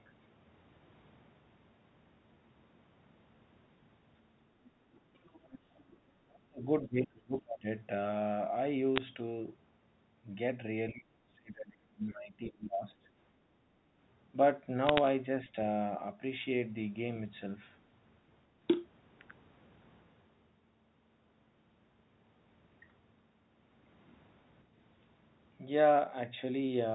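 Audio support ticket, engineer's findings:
Other side's voice leaking through: faint second voice at 4.64–4.71 s (about 30 dB under) and 5.33–5.58 s (about 20 dB under). Likely residual loudspeaker echo the echo canceller missed.

Speech suppressed in double talk: near-end dips at 5.17–5.28 s (about 25 dB), 6.15–6.68 s (about 40 dB), 6.86–7.67 s (about 30 dB), 10.92–13.07 s (about 35 dB). Likely the echo canceller attenuating both sides during overlap.

Bit errors on a digital phone line: bursts of sharp ticks at 8.96–9.02 s and 14.87–15.07 s, crackle over intact speech. Flipped bits on the G.711 mu-law path, at roughly a fifth of a percent error rate or less.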